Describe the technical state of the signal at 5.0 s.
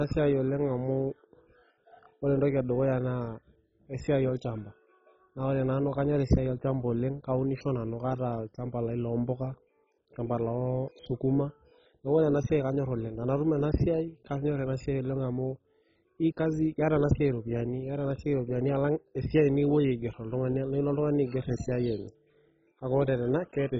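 At 5.0 s the speech is passing through what is likely MP2 compression, and the damage is present throughout the clip, not just at this moment. Starved of bits, the MPEG Layer II coder has switched off its upper sub-bands, so nothing survives above 7.5 kHz, and the few bands it keeps are coarsely quantised, which fits a very low bitrate of around 16 kbps. The result is dull, heavily degraded speech with a gurgling, granular texture.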